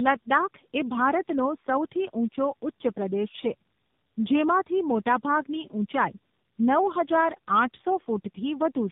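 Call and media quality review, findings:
Tandem speech coding throughout: rough, muffled, warbly speech, nothing above 3.8 kHz. Sound fits two low-rate speech codecs in series, likely G.723.1 then AMR-NB via a G.711 leg. Each decode/re-encode compounds the previous stage's artefacts.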